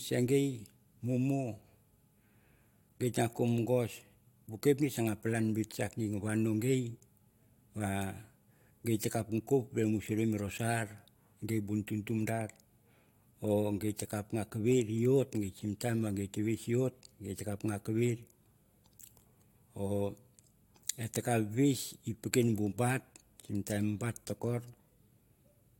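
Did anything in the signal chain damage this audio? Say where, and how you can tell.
No, nothing in this speech recording stood out on listening as damage from any stage of the signal chain.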